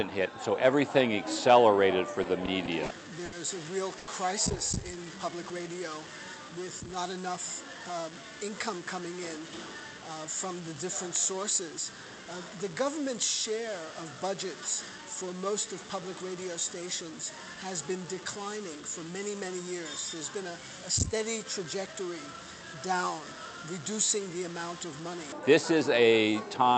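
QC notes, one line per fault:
2.23–3.34 s, repeated stalls (stutter): the jitter buffer ran dry five times as packets arrived late. The receiver extended the last sound to bridge each gap, filling 170 ms in total, with the longest gap 70 ms, about 15% of the span. Nothing is lost, but playback drags and stutters.
3.98–4.09 s, short stall from a late packet: one packet missed its slot and the buffer emptied. The receiver held the preceding sound for 90 ms, then resumed from the same point. Playback delay rose by 90 ms, and one sound is audibly held too long.
6.96–7.76 s and 21.59–22.08 s, jitter buffer speed-up: with excess audio queued, the receiver trimmed short pitch-period segments repeatedly to shed roughly 50 ms of delay in each run. Playback rises to 106% and 108% respectively at unchanged pitch, so both passages sound hurried.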